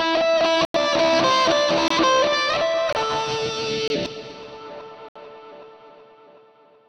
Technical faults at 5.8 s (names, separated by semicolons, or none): none